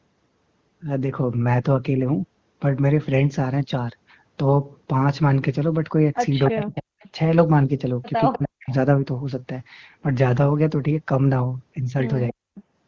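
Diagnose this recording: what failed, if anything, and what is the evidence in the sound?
Echo leak, a call-processing fault, most likely from a loudspeaker whose echo canceller let some pickup through. A delayed copy of the speech appears at 6.45–6.63 s, 7.02–7.08 s, 8.32–8.74 s and 12.55–12.62 s. It sits a constant 303 ms behind the original, at about 10 to 30 dB below it, loudest near 6.5 s. The fixed lag and scrappy, intermittent nature separate it from room reverberation, which would trail every syllable smoothly rather than repeat it as a distinct copy.

Speech suppressed in double talk, also in call processing: the talker's level collapses by roughly 40 dB at 6.5–6.94 s, 8.34–8.73 s and 12.32–12.53 s, each stretch a few hundred milliseconds. The first two dips coincide with echo bursts. That points to the canceller treating overlapping speech as echo and turning everything down. 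Unlike packet-loss gaps, the cuts follow the other side's activity and show no codec smearing or repeated fragments.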